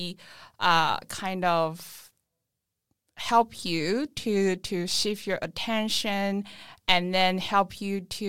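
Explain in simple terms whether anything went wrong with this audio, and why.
Sample clock jitter runs through the whole speech clip: the recording clock wobbled by a microsecond or two, adding a faint hiss that grows on loud, bright sounds.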